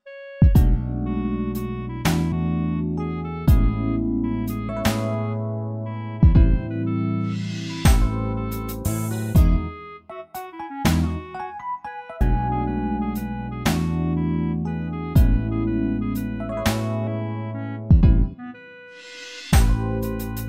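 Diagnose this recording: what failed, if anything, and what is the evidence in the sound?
The codec stage is dropping compressed frames. There are short forward jumps at 2.32, 4.69, 12.21 and 17.07 s, losing roughly 70, 150, 200 and 150 ms, which fits whole 32 ms frames going missing.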